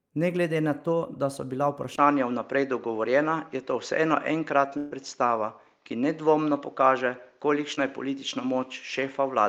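At 1.96 s the speech drops out for about 20 ms and comes back with a different character that lasts to the end. From here the band stops at 7.3 kHz, so the speech is duller. The level shifts by a modest amount, and a faint new background noise sits well below the speech. This is likely an input switched to a poorer device. A codec or bandwidth change would narrow the band but wouldn't bring in a new noise floor, a level step and a brief gap at one instant.

From 4.77 to 4.93 s there is a burst of packet loss. About 140 ms of speech never arrived. The receiver covered roughly 135 ms of it by carrying the last sound forward and fading it, so the speech turns into a held, dying sustain before resuming further along, with that stretch missing. No silence opens up, which separates it from a dropout or a muted gap. Its length separates it from a momentary glitch.

Between 7.75 and 7.79 s comes a short concealed packet loss. 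About 20 ms failed to reach the decoder in time, and roughly 19 ms of synthetic continuation was blended in before the real audio took over again. It is heard as a tiny smear or wobble rather than the held sustain and skip of the earlier burst.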